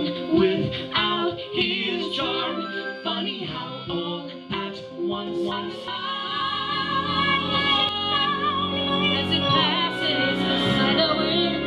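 A second copy of the audio has likely been captured through a slower path and mixed back in, giving a doubled audio track from 5.27 to 7.89 s. An equally loud, dry echo trails by around 400 ms, switching on and off abruptly.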